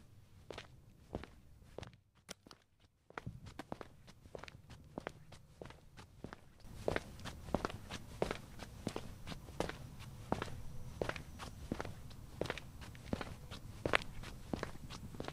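Sudden gain jumps hit this everyday-sound recording at 1.85 s, dropping about 12 dB until 3.17 s, and at 6.65 s, rising about 11 dB through the end. Sound and background noise shift level together instantly, likely from digital gain applied without a ramp.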